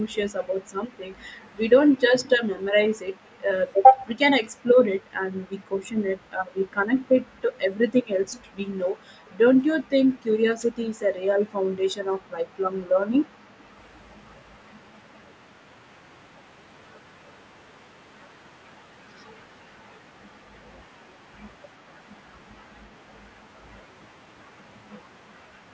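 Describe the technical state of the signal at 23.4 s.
At 23.4 s the signal is intact, with the speech passing cleanly through the call's ordinary microphone processing and no fault to be heard.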